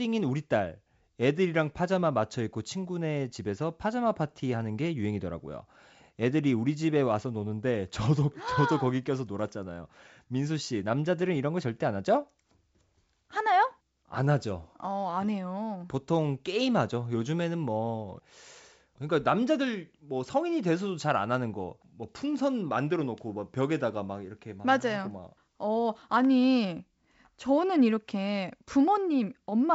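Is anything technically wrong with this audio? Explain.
No, nothing stood out on listening to this speech.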